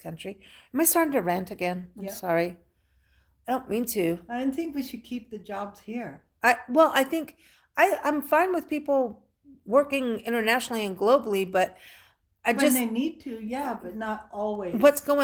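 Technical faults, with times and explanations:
No technical faults are present in the clip. The Opus voice compression runs in hybrid mode at 20 kbps with full bandwidth in 20 ms frames, leaving only light coding traces.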